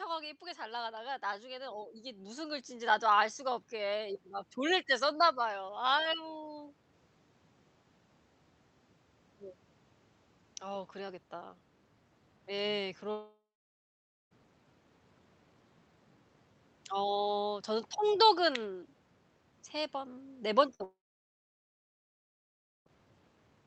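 A speech recording, carried over a call path with the Opus codec, where content above 8 kHz is cut off, so a spectrogram shows a flat ceiling at that frequency. From 0.39 to 6.79 s, automatic gain rising lifts the level by about 14 dB. The control judged the input too quiet and raised its gain gradually, so voice and room noise swell together. On a waveform, the envelope widens steadily across those six seconds, and on a spectrogram the background floor brightens along with the speech rather than staying fixed. At 13.11 s the sound stops arriving for about 1.2 s, a long network dropout that is likely the cause. The last sound is stretched into a fading buzz or hiss, and after that roughly 0.9 s of silence follows before speech resumes at 14.33 s with the missing stretch simply gone. A spectrogram shows a smeared, fading band, then a blank column, and the waveform flattens to near zero. 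At 20.75 s a burst of packet loss removes about 60 ms. The final sound is held briefly as a decaying tail until 20.82 s, visible as a short horizontally smeared patch. Almost immediately, at 20.84 s, what is likely a second long network dropout begins, running to 22.88 s. It loses about 2 s of audio, with a short fading tail and then about 1.9 s of silence, appearing as another flat, empty gap in the waveform.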